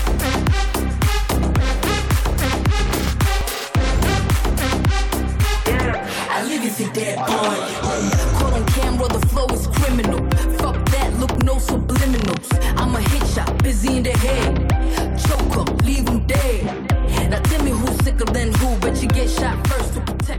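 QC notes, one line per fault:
1.43, 3.41, 5.40, 7.38, 9.37, 11.35, 13.36, 15.35–15.37 s: overlap between stream segments. Every 2 s, about 8–20 ms of audio is dropped at a segment joint, so the waveform steps abruptly, heard as a tiny skip. A spectrogram shows thin broadband vertical lines.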